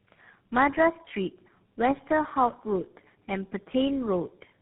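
Throughout, tandem speech coding: three speech codecs in series, ending in GSM full rate, each recoding the previous one's errors, so speech sounds rough, warbly and muffled, with nothing above 3.8 kHz.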